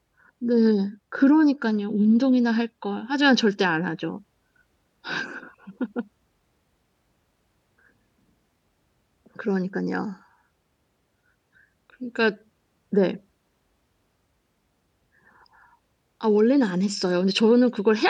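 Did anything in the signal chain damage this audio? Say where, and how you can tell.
No, nothing in the signal chain audibly damages this speech recording; the level, continuity and timing of the signal hold steady with no sign of trouble at any stage.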